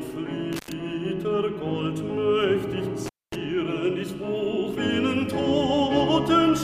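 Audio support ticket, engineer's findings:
Intermittent contact, two dropouts: 0.53 to 0.72 s (open about 89 ms) and 3.06 to 3.35 s (open about 234 ms). Crackle at each break edge, faint hiss while open. Probable loose cable or plug briefly breaking the signal path.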